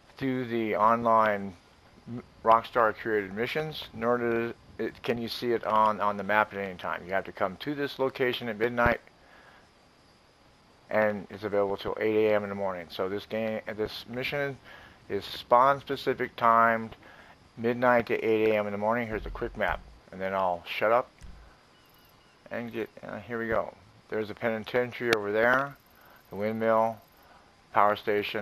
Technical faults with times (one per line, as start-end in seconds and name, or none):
none